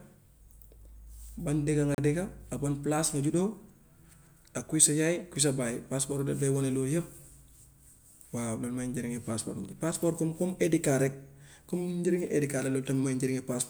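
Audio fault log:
1.95–1.98 s, Bluetooth stall: the speech cuts to silence for 35 ms, then resumes. The likely cause is radio interference delaying packets until the headphones' buffer ran empty, so playback halted briefly until the resent audio data reached the receiver.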